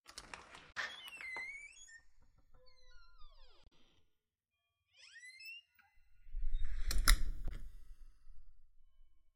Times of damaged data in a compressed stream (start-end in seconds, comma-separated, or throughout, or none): 0.69-0.77, 3.64-3.69, 7.45-7.52